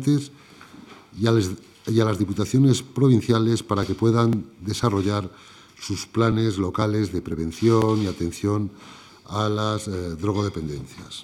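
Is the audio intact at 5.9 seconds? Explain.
No. Around 5.9 seconds the sound carries regular ticks about every 0.5 s, part of periodic USB or driver dropouts running from 3.83 to 8.32 s. Each tick is a couple of milliseconds of audio skipped when something blocks the bus or driver.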